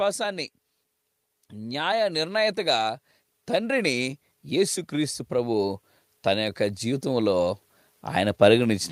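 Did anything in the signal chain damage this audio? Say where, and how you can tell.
Yes. Speech and background swell together, about 4 dB over 1.51–2.89 s and about 7 dB over 3.47–7.56 s. This is automatic gain rising in call processing as it lifts a quiet input.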